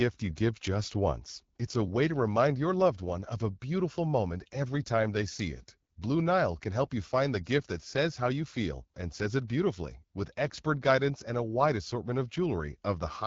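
Throughout, the speech passes through the AMR wideband (HD Voice) codec at a low mode fitting 8.85 kbit/s, leaving it plainly rough and raspy, with noise-filled top end.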